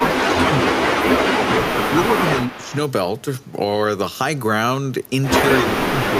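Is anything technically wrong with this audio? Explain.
Yes. Speech suppressed in double talk occurs at 0.0–0.78 s, 1.49–2.75 s and 5.59–6.18 s. The speech level dips by up to roughly 15 to 20 dB in pieces, most likely because an echo canceller attenuated the near talker along with the far-end echo while both sides were talking.

An echo leak occurs at 2.47–2.75 s: a faint copy of the speech returns about 0.3 s late, roughly 20 dB below the direct speech. The likely cause is a far-end loudspeaker echo that the echo canceller did not fully remove.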